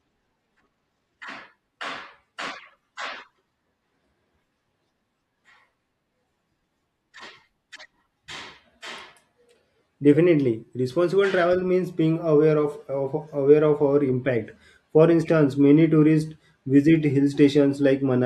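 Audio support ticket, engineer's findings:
Clock slip clicks, 0.25 s to end: faint regular ticks about every fifth of a second, around 70 total, clearest on loud speech. Likely unsynchronised device clocks, error near 100 ppm. Spectrogram: thin evenly spaced vertical lines. Waveform: single-sample steps.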